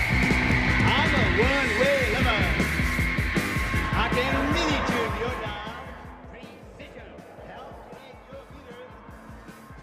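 At 7.15 to 7.19 s, short concealed packet loss: about 20 ms never arrived and was filled by extending the preceding sound. It is heard as a brief smear or wobble, and on a spectrogram it looks like the preceding sound briefly smeared forward in time.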